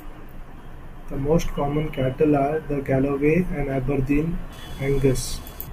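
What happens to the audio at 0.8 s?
Nothing goes wrong at 0.8 s; the speech plays through that moment intact, with no dropout, click or distortion.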